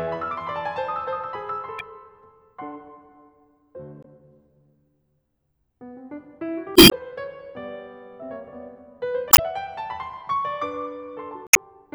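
Damaged data in the compressed stream hits the music five times, at 1.77, 4.01, 6.73 (longest, about 0.2 s), 9.29 and 11.47 s. The decoder misreads corrupted frames and loses sync, giving short chirps, squawks, clicks or holes.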